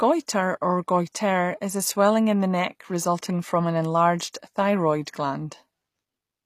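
From start to finish the speech has plainly audible codec damage, likely HE-AAC compression, which fits a bitrate around 24 kbps. The treble is rebuilt from copied lower bands rather than coded directly, so s sounds come out gritty and metallic, and nothing reaches above 15 kHz.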